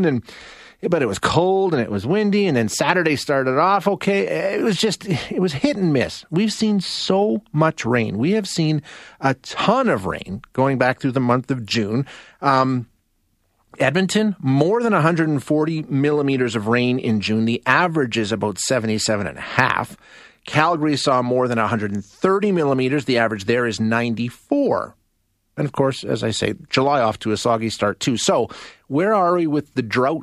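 Listening closely to the speech revealed nothing that stood out as a technical problem at any point.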